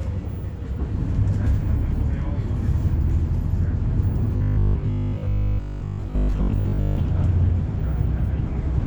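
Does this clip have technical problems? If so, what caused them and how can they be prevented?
Yes. From 4.37 to 6.97 s there's robotic sound from repeated short buffers: a rigid 50 Hz buzz. That likely comes from audio arriving too late and a 20 ms chunk being looped in its place for most of that stretch. Giving the audio path a bigger buffer or a better jitter allowance, so data arrives on time, would prevent it.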